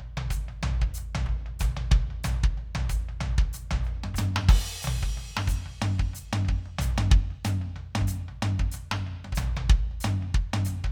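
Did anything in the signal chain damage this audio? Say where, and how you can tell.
No, nothing stood out on listening to this music that would point to damage at any stage of the chain.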